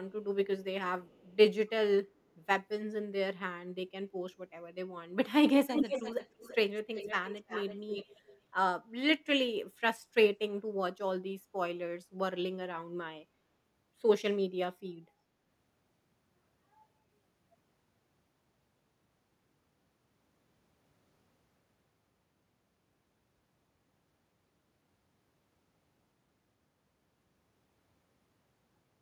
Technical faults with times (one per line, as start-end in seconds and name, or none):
1.05-1.36 echo leak
5.72-8.38 echo leak